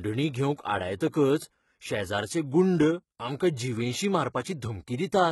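The whole clip carries heavy codec damage, likely from HE-AAC at a low bitrate around 16 kbps. Nothing reaches above 11.8 kHz, and the treble is rebuilt from copied lower bands. At 1.10 to 1.13 s there's pre-echo: about 25 ms of block-spread quantisation noise arrives as a brief hiss just before an attack, softening its onset.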